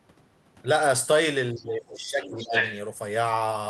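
From 1.53 to 2.59 s the talker's level sags, reaching about 15 dB down at its deepest and staying pulled back for roughly a second in total. This is speech suppressed in double talk. The dips coincide with a second voice being present, which points to an echo canceller that likely could not separate the near talker from loudspeaker echo and turned both down.

Within that stretch, the other side's voice leaking through first shows up as two brief scraps at 1.68 to 1.72 s and 1.96 to 2.00 s, about 30 dB and about 20 dB below the talker. A longer stretch follows from 2.22 to 2.75 s at about the same level as the speech. It is a separate voice rather than a smeared tail of the talker's own sound, which distinguishes it from room reverberation. The likely cause is residual loudspeaker echo the canceller failed to remove. Both voices are carried through the same 12 kHz-limited call path.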